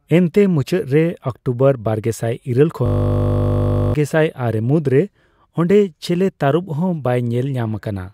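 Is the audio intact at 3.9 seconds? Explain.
No, 3.9 s falls right at the tail of a system hang loop that runs from 2.86 to 3.94 s. The system froze while the sound hardware kept replaying the same ring buffer, so one 20 ms slice repeats over and over, 54 times. At a 50 Hz repeat rate that comes across as a steady buzz rather than a stutter, and roughly a second of real audio is gone. Normal speech picks up again with "ᱟᱨᱮ ᱢᱩᱫᱽ ᱨᱮ".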